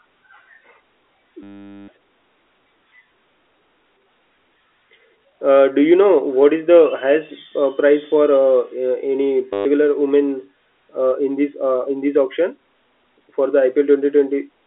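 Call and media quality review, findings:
Packet loss with last packet repeated, 1.43–1.88 s and 9.53–9.65 s: robotic stutter, buzz near 100 Hz fitting 10 ms packets. Receiver jitter buffer or concealment; G.711 telephone band intact.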